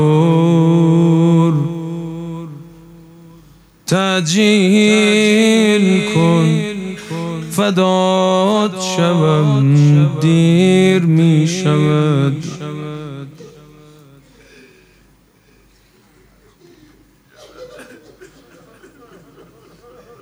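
Gain pumping runs through the whole clip. The gain swings by around 5 dB. Loud and soft parts sit close in level. The likely cause is input gain set far too high, with a fast limiter clamping down.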